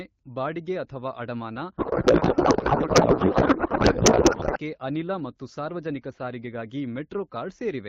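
From 1.77 s to 4.58 s the speech gives way to garbled noise and warble that barely tracks the talker. This is a codec payload misread: the AMR frames are still arriving, but the receiver unpacks their bits in the wrong layout, which points to octet-aligned packing being read as bandwidth-efficient, so every field lands out of place. Around it, the AMR-WB HD Voice sounds clear and lightly coded, consistent with a 12.65 kbit/s rate.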